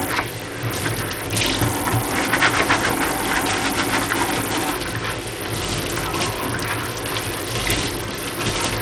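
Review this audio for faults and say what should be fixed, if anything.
Throughout, the treble flickers and drops out while a gritty, grainy noise with aliasing rides on the sound. This is likely Bluetooth SBC compression with a small bit pool, consistent with about 80 kbps, starving the top sub-bands of bits. Prevent it by capturing over a wired link or a higher-quality Bluetooth codec.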